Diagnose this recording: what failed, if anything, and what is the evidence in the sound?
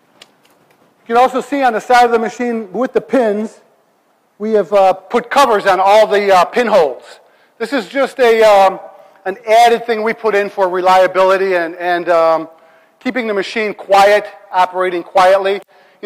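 Nothing failed; no faults heard.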